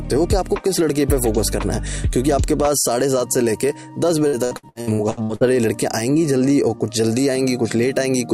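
Repeated packet loss (robotic sound) runs from 4.27 to 5.44 s. Over this stretch of a bit more than a second, audio data went missing or arrived too late several times in quick succession, and each hole was bridged by stretching out the sound just before it. The patches add up to just over half a second, about 46% of the span, with the longest single gap around 64 ms. The result is a choppy texture with pieces of the audio gone.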